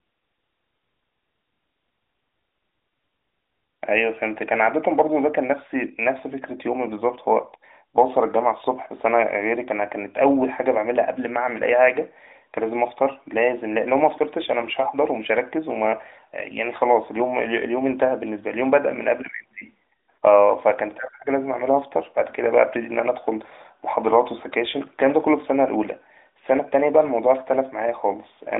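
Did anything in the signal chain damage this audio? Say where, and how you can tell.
No, nothing damaged this audio.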